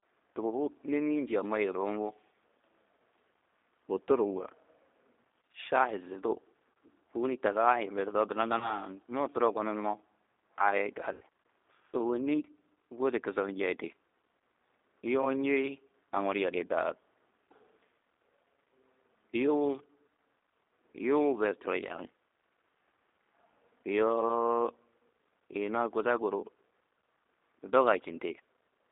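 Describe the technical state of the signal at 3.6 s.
G.729 coding runs throughout, including 3.6 s: speech is rebuilt from a filter, pitch predictor and sparse pulses, which fits roughly 8 kbit/s, leaving a 300 Hz to 3.7 kHz band with plainly audible rough, synthetic texture.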